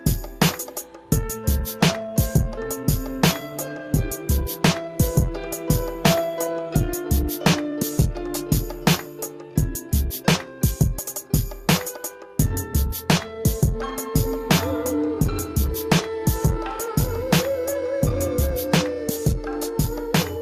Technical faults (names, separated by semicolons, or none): none